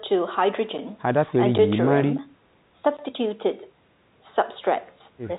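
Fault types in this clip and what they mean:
No faults can be heard.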